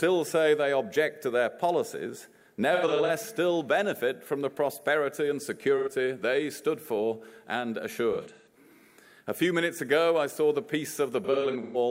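AAC frame loss with concealment hits the audio at 2.74–3.10 s, 5.77–5.88 s, 8.12–8.48 s and 11.24–11.77 s. The decoder patches the missing stretches, up to about 0.15 s at a time, from earlier spectra, producing smeared, phasey spots. On a spectrogram these appear as blurred, noise-like blocks with lost fine detail.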